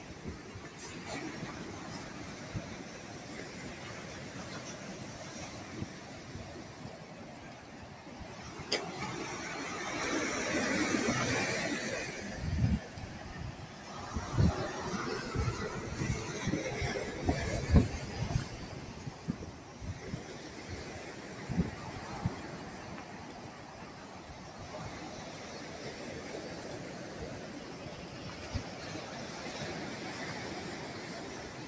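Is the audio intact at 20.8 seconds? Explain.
No. At 20.8 s, as throughout the clip, a noise suppressor applied to music or sounds is treating sustained tones and tails as noise, pumping them down by roughly 5 dB. This shows as fluttering, dipping waveform envelopes and patchy, thinned spectrogram energy between attacks.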